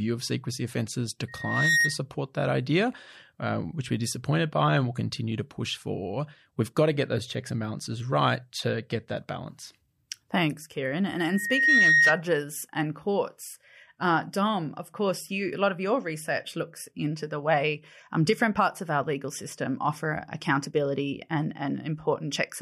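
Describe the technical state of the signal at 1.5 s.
At 1.5 s a loudspeaker feedback squeal runs from 1.28 to 1.99 s, after "of secrecy offences". The microphone re-amplifies its own speaker at 1.9 kHz, a tone swelling over roughly 0.4 s to about 5 dB above the speech, one bright horizontal spectrogram line.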